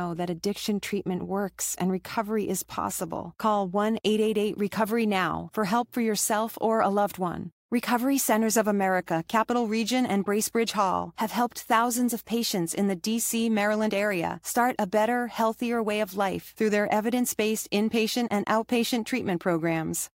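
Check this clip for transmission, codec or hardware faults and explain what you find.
Listening through the speech recording reveals nothing attributable to transmission, codec or hardware problems, and the signal holds steady throughout.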